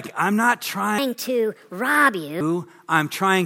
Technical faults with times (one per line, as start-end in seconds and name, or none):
0.98-2.41 wrong sample rate